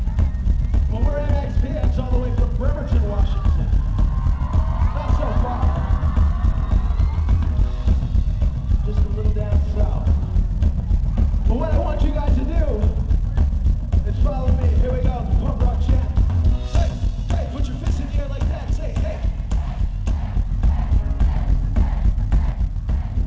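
No technical faults are audible; the audio has passed through a wideband call path, with nothing above 8 kHz, which fits a G.722 codec.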